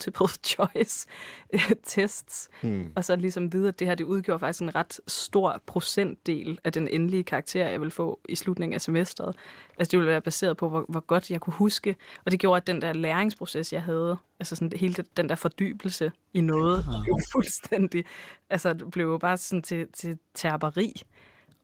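At 16.57 to 16.61 s, a very faint delayed copy of the speech appears, lagging about 163 ms. This is an echo leak. The far end's echo canceller likely failed to remove its loudspeaker pickup. Louder scraps return at 16.82 to 17.0 s and 17.16 to 17.25 s, roughly 15 dB below the speech.

From 17.0 to 17.43 s, the speech dips and breaks up, falling by around 15 dB at worst. This is speech suppressed in double talk. Both sides were likely talking at once, so the canceller turned everything down.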